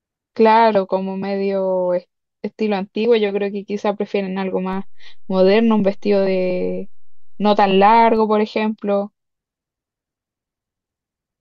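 DC step at 4.73 s: the waveform's zero line jumps to an offset of about -28 dBFS and holds there until 8.17 s, when it steps back. Each shift in the baseline lands as a low thump or click, while the speech itself runs on unchanged.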